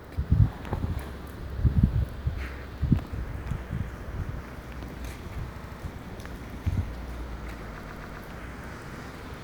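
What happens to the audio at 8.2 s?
Repeated frames, from 7.83 to 8.22 s: a block of compressed data about 131 ms long, which fits a run of five frames, was sent again and decoded three extra times. The same slice of sound stutters back, stretching the audio by about 392 ms.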